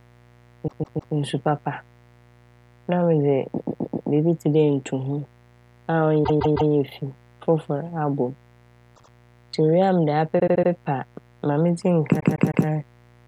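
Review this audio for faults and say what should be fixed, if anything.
Mains buzz: switching spikes from a dimmer, rectifier or unshielded cable leaked into the 60 Hz path, so harmonics reaching several kilohertz ride under the speech for the whole clip. The result is a steady, raspy buzz about 30 dB below the speech. Shield and ground the cabling, and keep dimmers and switching supplies off the recording circuit.

Repeated frames: runs of compressed frames were written or sent more than once, so the decoder replays the same slice of audio, lengthening the clip. The stutters fall at 0.67–1.14 s, just before "nsu papa", where a 157 ms block plays three extra times; 3.57–4.09 s, just before "biibi tse dɛ", with a 131 ms block four extra times; 6.23–6.70 s, with 157 ms three extra times; 8.95–9.11 s, with 78 ms two extra times; 10.39–10.70 s, with 78 ms four extra times; and 12.19–12.66 s, with 157 ms three extra times. 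Fix the writer or transport so that retried or buffered frames are dropped rather than appended again.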